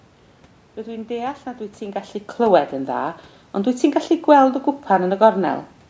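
No system faults are audible: the speech carries the normal call microphone processing with nothing above 8 kHz, room noise sits underneath, and the level shift around 1.5 s is the talker moving relative to the microphone.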